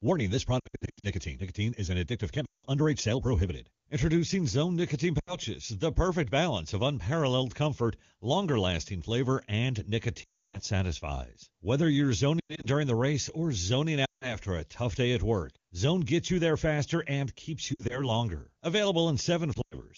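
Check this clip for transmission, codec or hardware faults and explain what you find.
The clip has repeated lost AMR speech frames, heard as eight short concealment episodes. They fall at 0.59–1.07 s, 2.45–2.66 s, 5.19–5.36 s, 10.23–10.60 s, 12.39–12.67 s, 14.05–14.37 s, 17.73–18.10 s and 19.54–19.83 s.

When corrupted frames fail their check, the decoder repeats the last good pitch and vocal-tract settings at a falling level. The speech smears and thins, then comes back rough. Several episodes, such as the first and the one near 12.4 s, are scattered hits, so they sound like a stuttering warble rather than one fade. In longer runs the sound drops to near silence within two frames. Between episodes the wideband codec is clear, which fits a high-rate AMR-WB mode.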